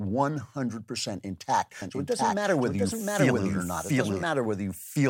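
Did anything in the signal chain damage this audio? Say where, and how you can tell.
Yes. From 1.82 s to 4.24 s the speech is joined by a doubled audio track: a second, full-band copy trailing by around 0.7 s at roughly the same level, with no decay or room colouring, switching in and out abruptly at those points. The stage is likely an edit or mix where two copies were left out of step, or a slower capture path feeding the same signal in a second time.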